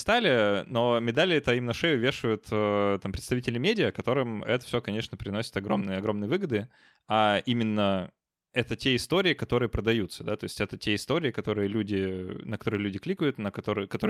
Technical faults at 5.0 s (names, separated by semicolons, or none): none